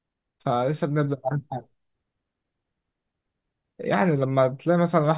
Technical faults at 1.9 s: none

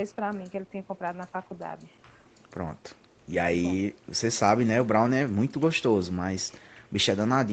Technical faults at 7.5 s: none

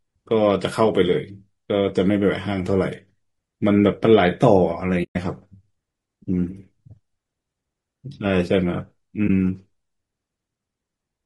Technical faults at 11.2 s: low-delay AAC compression

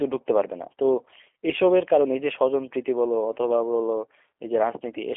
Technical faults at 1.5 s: G.729 codec

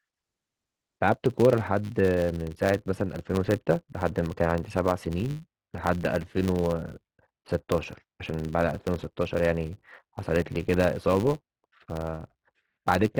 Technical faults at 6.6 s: filter restarted on every block

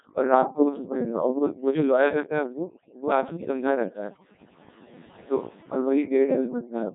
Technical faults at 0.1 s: overdone noise removal; Codec 2 vocoder

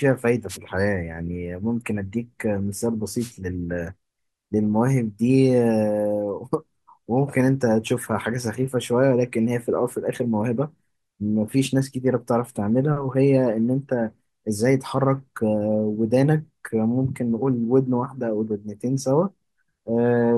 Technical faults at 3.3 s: wireless microphone noise hit

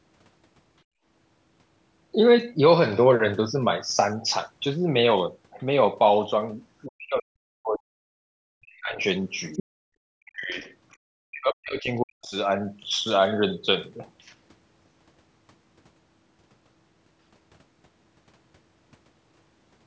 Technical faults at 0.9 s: background gated by the echo canceller

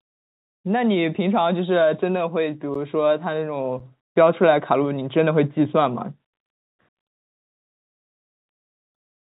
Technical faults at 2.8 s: automatic gain rising; block of digital silence

